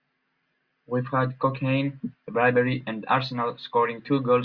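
No technical faults are audible.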